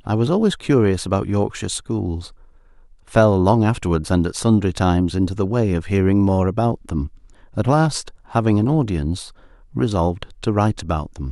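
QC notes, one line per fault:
No faults heard.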